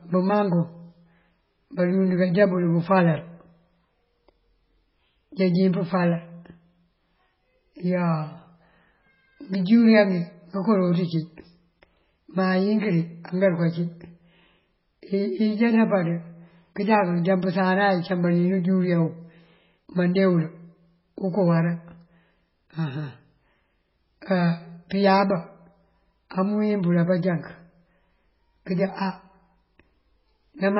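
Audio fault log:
Throughout: MP3 compression. Nothing remains above 5.5 kHz, so the speech sounds dull. Quiet detail swirls and warbles as weak frequency components drop in and out between frames. This heavy damage is likely from a starved encode, one that fits 16 kbps.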